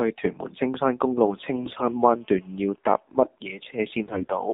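A speech clip carried over the AMR narrowband mobile codec, which fits its 7.4 kbps mode. The line passes only about 200 Hz to 3.7 kHz, so the voice is thin and muffled, and the heavy low-rate coding of the vocal-tract model gives plainly audible buzzy, synthetic damage throughout. On a weak link, AMR bit errors flipped a few percent of the less protected bits in each affected frame at 1.56 to 1.88 s and 4.06 to 4.28 s. Each burst fits roughly a dozen damaged 20 ms frames. The excitation pulses and the fine pitch, gain and spectral values were decoded wrongly, so in those stretches the voice keeps roughly its pitch and level but turns hoarse, scratchy and gargly.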